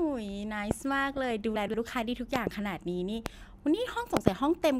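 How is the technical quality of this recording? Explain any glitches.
The speech is marred by three kinds of fault: repeated loud pops, a short burst of DAB burbling, and one jumbled moment where chunks play out of order.

Loud pops occur four times: 0.71 to 0.73 s, 2.36 to 2.49 s (a double pop), 3.26 to 3.28 s, and 4.17 to 4.30 s (another pair). Each is a sharp, hard thump that stands well clear of the speech, about 20 dB above it, and the last pair is nearer 25 dB. The speech continues underneath. The likely cause is a sudden voltage step or spike entering the signal chain, such as a connector, switch or static discharge, which the following circuitry rounds into a pulse.

DAB burbling runs from 1.14 to 1.31 s. The speech burbles as individual frequency bands pick up blips of noise or jump in level. This comes from weak digital radio reception. A small fraction of a percent of bits arrived corrupted and slipped past error correction into the compressed audio. 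The corrupted data then made eight frames decode with misbehaving sub-bands.

Chunks out of order appear between 1.56 and 1.74 s. The speech briefly sounds garbled, as if a fragment were misplaced. A 60 ms piece of audio arrived late and was played two chunks after its proper place. Nothing is missing, but the sequence is scrambled. There are three abrupt splice points, where unrelated waveforms meet.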